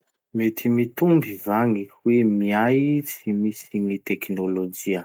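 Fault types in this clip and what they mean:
There are no fault types in this clip.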